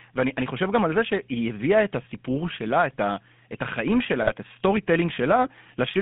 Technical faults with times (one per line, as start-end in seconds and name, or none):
0.00-6.01 GSM full-rate codec
4.20-4.32 GSM bit errors